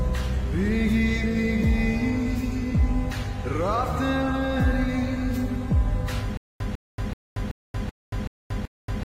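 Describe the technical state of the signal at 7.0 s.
A 150 ms burst repeats seven times every 380 ms with 231 ms of digital silence between, a stutter with silent gaps from 6.37 s to the end, likely a stalled stream replaying its last fragment.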